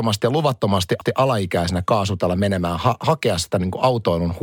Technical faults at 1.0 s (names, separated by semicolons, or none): CD skip